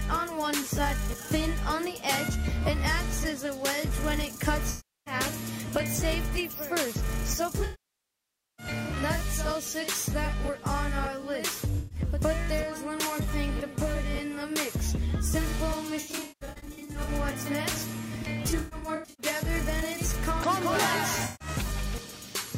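AAC frame loss with concealment breaks the audio at 4.70–5.14, 7.64–8.66, 11.78–11.99, 16.00–17.09, 18.50–19.26 and 21.25–21.48 s, the 16 s and 18.5 s spans being scattered short runs. Unlike hard dropouts, the gaps are filled with smeared, noisy resynthesis, and the nearly one-second loss at 7.64 s fades down and back.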